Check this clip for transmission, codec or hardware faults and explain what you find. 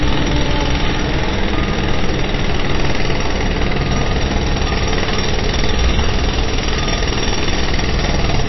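One codec fault runs through the whole clip. MP3 compression, likely, is audible from start to finish: nothing remains above 5.8 kHz because the starved encoder cuts the treble and drops weak frequency lines frame by frame. This gives a dull, watery, swirling texture with smeared attacks, which fits a bitrate of roughly 24 kbps.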